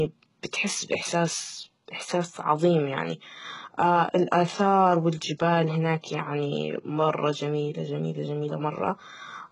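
From start to finish, the speech carries heavy damage consistent with HE-AAC compression, likely at a very low bitrate around 12 kbps. Only the lower spectrum is truly coded. The treble is rebuilt by copying lower bands upward under a coarse envelope. So the top end sounds false. Its harmonics do not line up with those below. S sounds turn gritty and lispy. Nothing reaches above 11 kHz.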